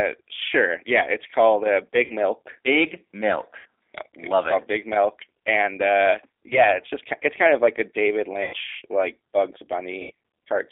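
From start to finish the speech carries G.729 codec damage, plainly audible as a rough, slightly synthetic texture. At 8 kbit/s the codec rebuilds each 10 ms frame from a vocal tract filter, a pitch predictor and a few pulses, and the line passes only about 300 Hz to 3.6 kHz. On a spectrogram, energy stops sharply near 3.6 kHz with little below 300 Hz, and the harmonics look smeared and grainy.

VoIP packet loss concealed by the speech codec then interrupts the audio five times. The first is at 2.04–2.13 s, right after "it's called uh", covering about 60 ms of lost audio. The second, at 3.59–3.66 s, also covers about 60 ms. At 6.49–6.78 s, between "and uh" and "just it's kind of", only 20 ms is missing, but the disturbance lasts far longer. At 8.43–8.54 s about 100 ms is lost, and at 10.02–10.11 s about 80 ms. These gaps fit runs of 20 ms packets.

At each gap the decoder repeats its last pitch and filter at a falling gain, stretching the sound into a buzzy tone or coloured noise that fades. 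Because each frame builds on the previous one, the sound stays weak afterwards. In a waveform, the envelope shrinks into a regular periodic pattern. In a spectrogram, frozen horizontal harmonic lines fade out before normal speech detail returns.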